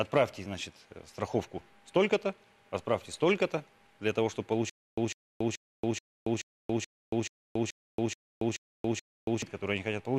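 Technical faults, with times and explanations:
4.70–9.42 s, stutter with silent gaps: a 151 ms fragment repeats 11 times, each followed by 279 ms of digital silence, an even 430 ms cycle. The stream likely stalled and replayed its last buffered fragment on each retry, so the audio due in that span is lost.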